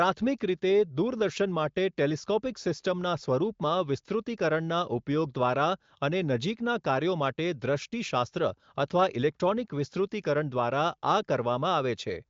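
No technical faults can be heard in this recording.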